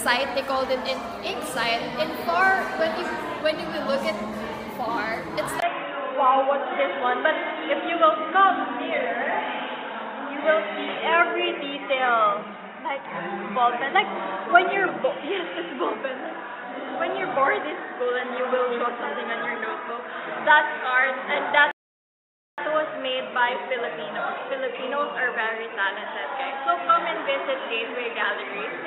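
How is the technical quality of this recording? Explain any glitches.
Two glitches affect the recording. At 5.60 s the sound turns dull and stays that way to the end, with nothing above 3.8 kHz. A brief 20 ms silence marks the change, and a new noise floor sits roughly 35 dB under the signal. The level stays about the same. The likely cause is an input switched to a poorer device with a narrower band.

From 21.71 to 22.58 s there is a rebuffering stall. The player ran out of data and paused, adding 0.87 s of silence. Playback then resumes exactly where it stopped.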